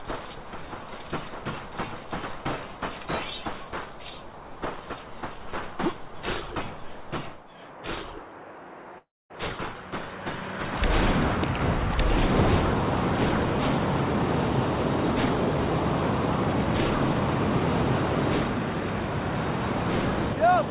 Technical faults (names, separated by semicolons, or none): long network dropout